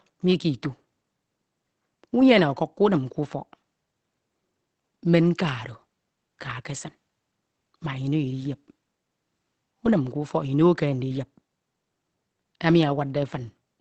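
Throughout the speech, the sound is muffled and hoarse, with nothing above 8.6 kHz. This is likely from Opus compression in its SILK speech mode, at a rate that fits roughly 16 kbps. A spectrogram shows a hard ceiling at 8.6 kHz.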